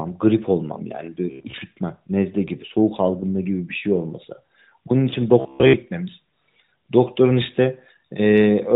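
From 1.31 to 1.63 s and again from 5.40 to 5.73 s, the speech becomes a rigid metallic buzz fixed near 67 Hz, likely robotic sound from repeated short buffers: 15 ms chunks replayed over about half, then most, of each stretch. Unlike narrowband codec buzziness, this pitch stays locked rather than following the voice.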